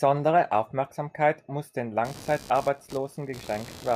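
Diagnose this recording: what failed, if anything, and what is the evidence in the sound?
Computer activity noise, in the analogue wiring. From 2.04 s to the end, a buzzing pulse train of around 70 Hz sits about 20 dB below the speech. It does not follow the speech. Processor or graphics load is modulating the shared audio ground.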